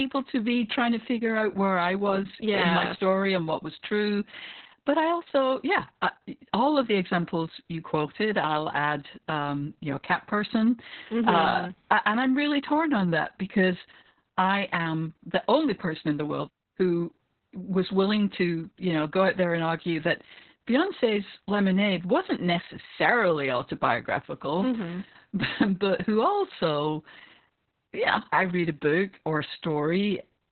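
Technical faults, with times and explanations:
Throughout: Opus voice compression; narrowband SILK coding cuts everything above 4 kHz and coarsely codes excitation, so speech sounds muffled, hoarse and robotic, fitting a 6 kbps bitrate.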